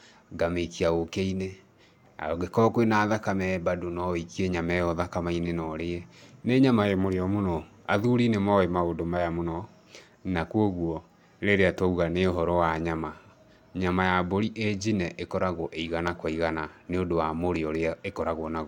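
No technical faults are audible anywhere in the speech.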